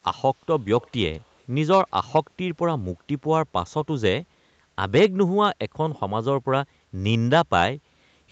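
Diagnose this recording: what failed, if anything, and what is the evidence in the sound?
From 0.81 to 1.18 s, a faint copy of the speech trails it by 208 ms, around 30 dB down. This is likely an echo leak in call processing, where a loudspeaker end's echo canceller returned residue. A spectrogram shows weak duplicate harmonics shifted 0.21 s later.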